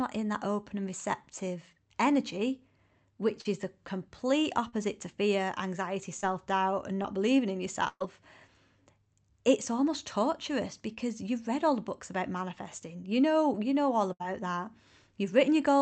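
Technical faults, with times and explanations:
3.41–3.47 s (just before "is the complete"), 4.69–4.75 s, 6.21–6.24 s, 7.02–7.06 s (between "doubt and" and "believing in") and 10.94–10.98 s: short concealed packet loss. Between 20 and 40 ms of audio failed to arrive and was replaced by a continuation of the preceding sound. Each gap is heard as a brief smear or wobble. The gaps are too short to make the sound fade, which sets them apart from the bursts below.
7.88–8.02 s and 14.12–14.22 s (right after "know you know all"): burst of packet loss. About 120 ms and 80 ms were lost. The first gap also has roughly 30 ms of silence. The concealment holds the last sound as a buzz or hiss that fades out, and when the audio returns, part of the content has been skipped. The longer duration and the fade distinguish these from the short smears above.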